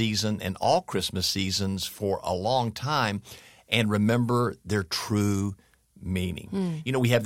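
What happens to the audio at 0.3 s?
Nothing goes wrong at 0.3 s; the speech there plays through intact, with no dropout, click or distortion.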